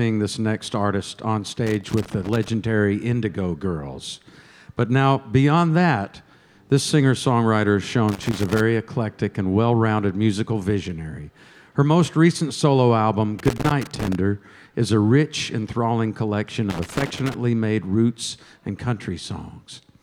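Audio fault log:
1.66–2.49 s, 8.09–8.60 s, 13.39–14.15 s and 16.70–17.34 s: loose connector crackle, four separate bursts lasting between about 0.5 and 0.8 s each. During each burst the signal path is repeatedly broken and restored by an unstable contact, so the audio is chopped into fragments at an irregular rate. The result is a rough, scratchy crackle laid over the sound. It stops cleanly between bursts, consistent with intermittent movement at a worn or dirty connector.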